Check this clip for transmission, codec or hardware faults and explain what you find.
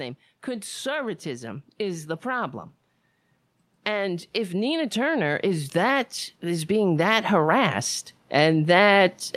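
Automatic gain rising occurs twice, from 0.15 to 2.6 s (about 4 dB) and from 3.71 s to the end. The gain control judges the input too quiet and lifts it slowly. Speech and background swell together.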